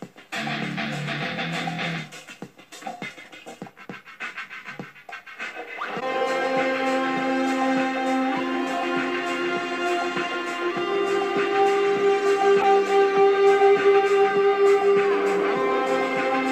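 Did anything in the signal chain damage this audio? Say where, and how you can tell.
Yes. Brief glitches at 5.99–6.03 s and 12.61–12.65 s (the second louder) show a corrupt frame decoded: the codec played one damaged frame, misplacing spectral energy.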